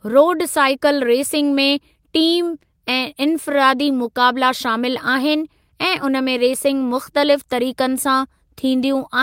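Nothing in this speech recording stands out as a technical fault. There are no moments that need a timestamp or an explanation.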